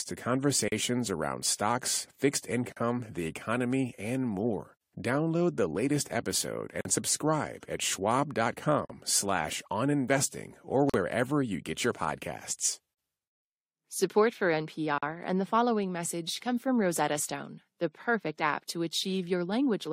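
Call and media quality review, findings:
Gap at a join of encoded pieces: about 43 ms silences (first about 39 ms) at 0.68, 2.72, 4.77, 6.81, 8.85, 10.90, 12.94, 14.98 s, every 2.0 s. Unlike packet loss, nothing is skipped: speech resumes exactly where it stopped. Cause is encoder delay and last-frame padding left untrimmed between pieces.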